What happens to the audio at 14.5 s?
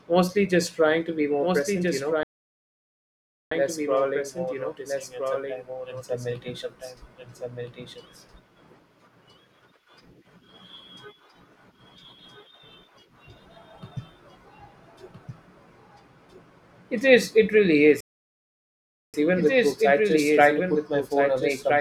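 At 14.5 s the speech carries a doubled audio track: a second full-band copy trails the original by roughly one and a half seconds, a few dB quieter, with no reverb tail. This fault runs through the whole clip, likely from a second, slower capture path. On a spectrogram, every pattern reappears shifted right by that delay.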